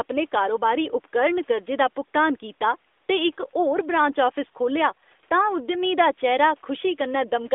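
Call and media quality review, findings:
No faults found in this clip.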